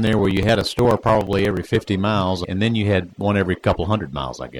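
Something on the USB bus or audio driver is stalling the stream every 0.06 s from 0.07 to 1.81 s, producing periodic USB or driver dropouts. Around thirty chunks of about 4 ms are skipped outright, so the sound carries a rapid, evenly spaced ticking through that stretch.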